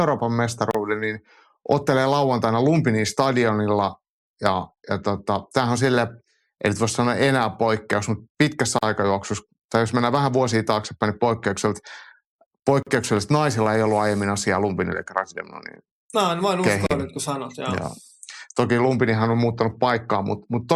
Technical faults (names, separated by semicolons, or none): gap at a join of encoded pieces